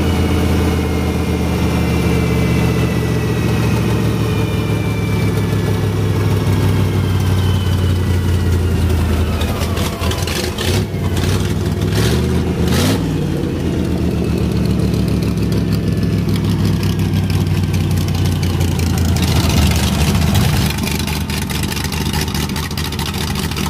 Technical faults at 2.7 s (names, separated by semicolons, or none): none